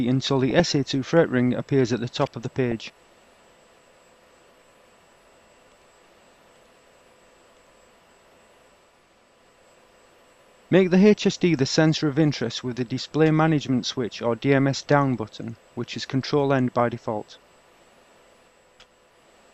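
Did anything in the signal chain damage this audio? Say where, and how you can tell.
Yes. Short noise blips in single sub-bands at 0.50–0.60 s and 2.68–2.72 s are DAB burbling: weak reception let bit errors corrupt MP2 audio data for a few frames.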